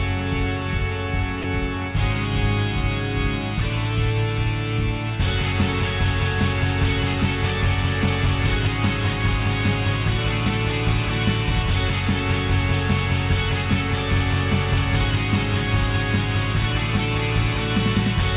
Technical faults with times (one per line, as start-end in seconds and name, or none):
1.42-1.44 sound dropped by the voice detector